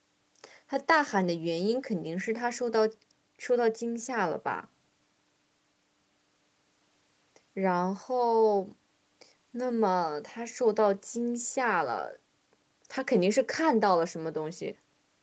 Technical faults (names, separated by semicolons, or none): none